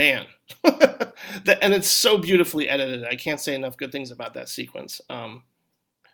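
Listening through the speech recording, nothing stood out as a technical fault at any point.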